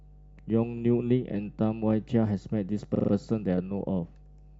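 The clip is speech with mains hum running throughout. A steady 50 Hz tone sits roughly 25 dB below the speech. It comes from a ground loop or nearby transformer leaking the power line into the signal. There are also repeated frames. At 0.77 to 0.81 s, a 42.7 ms block plays once more. At 2.94 to 3.11 s, the same-length block loops four extra times, making a stutter and adding 170.7 ms. Each block's length fits a pair of compressed frames being resent.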